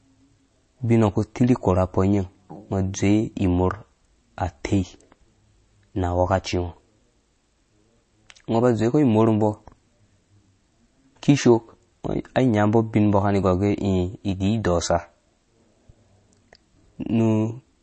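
MP3 compression, throughout: nothing sounds above 8.3 kHz, and the speech turns watery and swirly, likely from low-bitrate MP3 encoding, fitting roughly 32 kbps.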